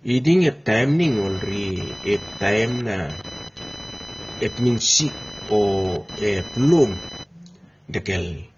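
The speech sounds dull and smeared throughout, with a fizzy, warbling edge on sibilants and nothing above 6.9 kHz. This is likely AAC compression, with AAC-LC at a low bitrate around 24 kbps removing the top band and coarsely quantising what remains.

From 1.02 s to 7.26 s, a buzzing, chirping tone pulsing at about 1 kHz sits roughly 15 dB below the speech and rises and falls independently of it. This is computer activity noise: changing processor or graphics load is disturbing the shared ground of the audio circuit.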